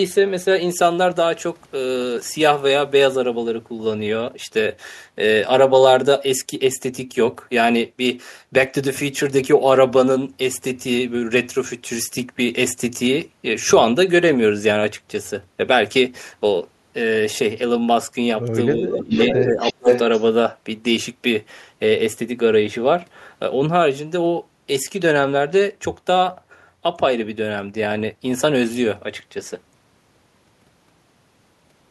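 Speech, with a delayed copy of the talker coming back at 18.77 to 19.03 s, somewhat quieter than the voice, and again from 19.19 to 20.23 s at roughly the same level. It trails by 456 ms. This is an echo leak, likely from a far-end loudspeaker whose echo canceller let its microphone pickup through. Over the same stretch, the far-end talker's voice dips between 18.77 and 19.6 s, for about half a second in total and by up to roughly 25 dB. It dips again by about 20 dB at 19.76 to 19.88 s. This is speech suppressed in double talk, likely the canceller turning down both its own talker and the echo because it could not separate the talker from the echo.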